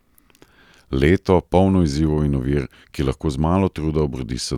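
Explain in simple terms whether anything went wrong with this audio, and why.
Nothing went wrong here.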